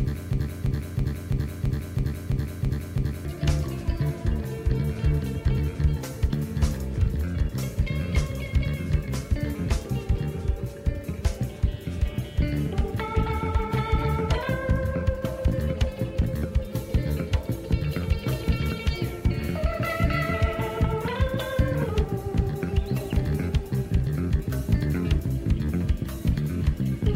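From the first instant to 3.25 s, a 0.33 s fragment repeats exactly, back to back, nine times, already looping as the clip opens: a broken-record loop. Playback or the stream likely stalled and kept resending its last fragment, so the audio for that stretch is lost.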